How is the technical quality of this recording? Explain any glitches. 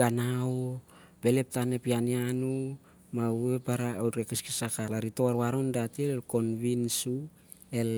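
There's one glitch, a very short one. At 4.88 s there's a tiny blip from damaged data in the compressed stream: part of the encoded speech data was damaged, so the decoder misread that frame and briefly lost sync before locking back on, leaving a split-second digital glitch.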